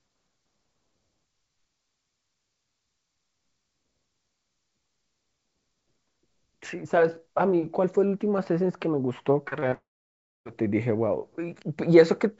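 Short concealed packet loss strikes at 9.48–9.53, 9.59–9.64 and 9.70–9.74 s. Audio packets arrived too late, so the receiver extended the preceding sound, leaving brief smears and wobbles in the speech. A long network dropout then likely cuts in from 9.74 to 10.47 s. The receiver stretches the last sound into a fading buzz, then about 0.6 s of silence follows, and the speech resumes with that stretch missing.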